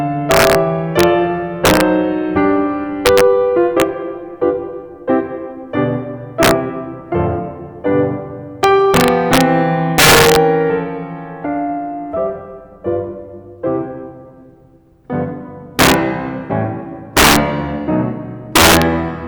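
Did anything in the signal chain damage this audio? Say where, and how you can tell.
Yes. The music carries integer overflow throughout, most likely introduced at a sample-format conversion or integer gain stage. The signal was driven about 9 dB past full scale, and instead of being held at the limit, each loud peak wrapped round to the opposite extreme. Under one percent of samples go over, but each one produces a violent crack far harsher than clipping. On a waveform, peaks jump abruptly from top to bottom rail. A spectrogram shows full-band vertical streaks at those moments.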